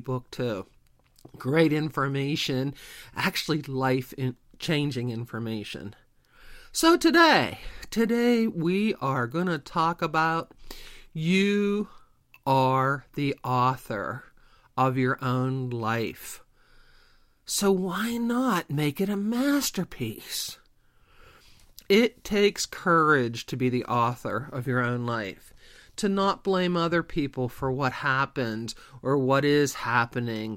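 A speech recording, and nothing is technically wrong with it.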